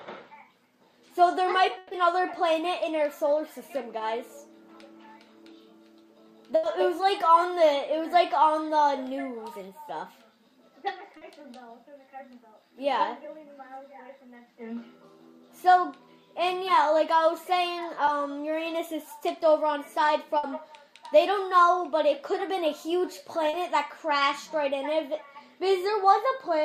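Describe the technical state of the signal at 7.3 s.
At 7.3 s the signal is intact, with no technical fault present at that point.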